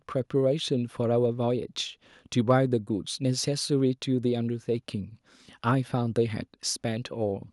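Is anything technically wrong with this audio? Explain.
No, nothing technically wrong can be heard here.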